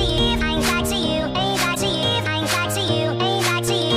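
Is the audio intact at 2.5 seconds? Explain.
Yes, the audio is intact at 2.5 seconds, with no fault audible at that moment.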